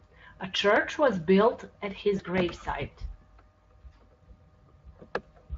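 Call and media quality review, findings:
Repeated buffer, 0.76 s, just before "was built at": buzzy click, one piece of about 1.33 ms played four extra times with hard joins, which fits a 64-sample output buffer. Playout underrun, not network. A few ms of sound dropped, no fade.

Repeated buffer, 2.38 s: same buzzy click, two extra plays, about 3 ms skipped. Distinct from packet loss because the repeats are exact copies with abrupt edges, not decaying extrapolation.

VoIP packet loss concealed by the speech codec, 2.17 to 2.22 s, after "was built at": one 20 ms frame lost. The Speex decoder stretches the last pitch and filter into a buzzy tone or coloured noise with falling gain, and the sound stays weakened after packets resume. This differs from the clicks in its smooth fade.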